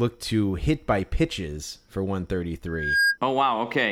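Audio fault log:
2.66–3.18 s, loudspeaker feedback squeal: a single tone at 1.6 kHz swells over roughly a third of a second and ends up about 5 dB above the speech. The microphone is hearing its own loudspeaker, and at that frequency the loop gain has passed unity, so the tone keeps reinforcing itself.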